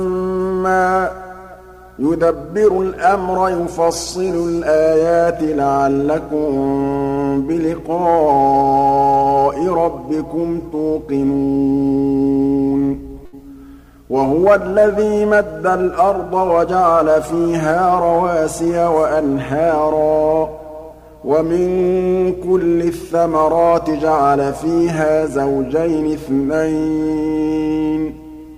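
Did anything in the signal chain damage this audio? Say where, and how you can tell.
Yes. The damage happened at the network stage, as a burst of packet loss from 13.25 to 13.35 s. At that point the sound stops progressing: the last bit of audio is held and faded out for about 72 ms, rather than cut to silence. When the signal returns, it picks up further along, with roughly 80 ms of material gone. That pattern matches several consecutive packets failing to arrive in time, with the receiver's concealment stretching and fading the last good audio to cover the hole.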